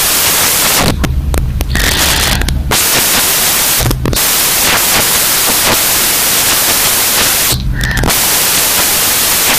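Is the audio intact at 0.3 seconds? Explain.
No, at 0.3 s it's samples built from the wrong bytes, running the whole clip: the jittery low bytes land as the big part, so the speech becomes loud, harsh broadband noise.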